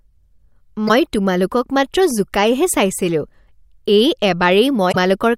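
At 0.85 s the speech breaks up for about 50 ms. At 4.89 s a second blip runs about 75 ms. Both are damaged data in a compressed stream. Corrupted bytes make the decoder misread frames and lose sync until it finds the next header.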